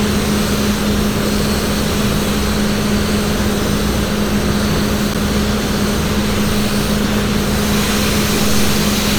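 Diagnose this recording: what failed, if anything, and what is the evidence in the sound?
A block of digital silence at 5.14 s points to the driver or buffer stage. The sound drops out for about 10.7 ms and snaps straight back, heard as a tick or dip rather than silence. That length fits a 512-sample buffer the program didn't fill in time.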